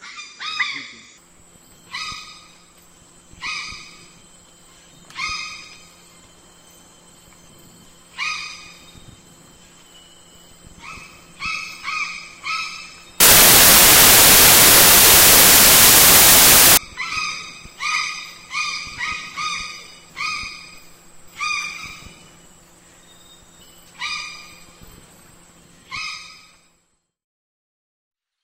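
From 13.20 to 16.77 s the samples are built from the wrong bytes: the reader pairs bytes misaligned or swapped, so rapidly changing low bits become each value's large part. It sounds like loud, harsh broadband noise, a dense block on the waveform and broadband fill across the spectrogram.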